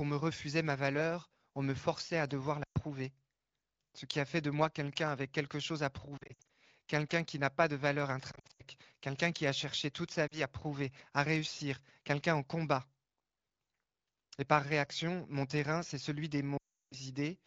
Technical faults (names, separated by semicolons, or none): lost AMR speech frames